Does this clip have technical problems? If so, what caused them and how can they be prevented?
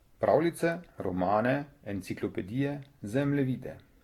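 Yes. Across the whole clip the speech sounds swirly and hollow, with consonant onsets smeared, and nothing comes through above about 17.9 kHz. That's generation loss, likely from the audio being decoded and re-encoded with Vorbis something like seven times, at rates that fit roughly 66 to 69 kbit/s. Each pass quantises again on a shifted frame grid, so the noise and spectral gaps keep piling up. To prevent it, keep a lossless master and encode to a lossy format only once, at the final step.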